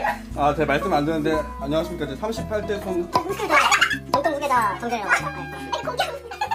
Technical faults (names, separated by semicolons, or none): section at the wrong speed